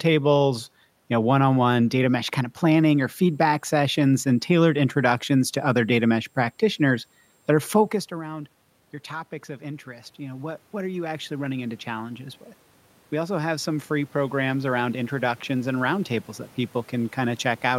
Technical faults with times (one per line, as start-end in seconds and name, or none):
2.78-17.78 switching supply whistle
9.58-12.47 automatic gain rising
13.10-16.08 automatic gain rising